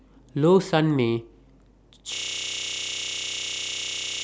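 At 2.15 s the speech gives way to a system hang loop that runs to the end: one 32 ms slice of audio repeats exactly, about 31 times per second, producing a steady buzz. This fits a 512-sample ring buffer replayed while the system froze.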